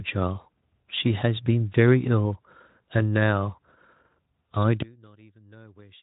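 Speech, carried through a Speex-coded path with nothing above 3.8 kHz and only light codec roughness. From 4.82 s to the end, the speech collapses by about 30 dB into a faint residue. The likely cause is one channel inverted. The two channels then cancel when summed to mono, leaving only their small differences.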